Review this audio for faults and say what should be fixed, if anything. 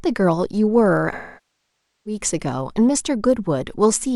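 AAC frame loss with concealment from 1.12 to 2.20 s: nearly a second of frames went missing, so the decoder stretched the last good spectrum, which decays to a very faint noise floor and then fades back. Adding forward error correction or retransmission on the link would stop losses that long.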